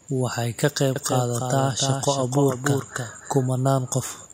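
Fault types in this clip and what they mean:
doubled audio track: From 0.96 to 3.50 s the speech is joined by a second, full-band copy trailing about 300 ms behind and only about 5 dB quieter, with no room colour and abrupt edges, likely from a second capture path or misaligned edit.
echo leak: At the very end, 4.15 to 4.33 s, a faint delayed copy of the voice surfaces 338 ms behind and about 35 dB down, likely loudspeaker sound on the far side that its echo canceller failed to remove.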